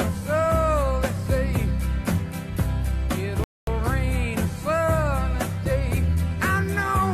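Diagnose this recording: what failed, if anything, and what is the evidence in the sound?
A rebuffering stall at the playback stage interrupts the audio from 3.44 s to 3.67 s. The sound goes to silence and then picks up exactly where it stopped, adding about 234 ms to the timeline. The player ran out of downloaded audio and waited for more to arrive. This differs from a dropout or packet loss, where material is removed or concealed. Here no content is missing, and the program is only delayed.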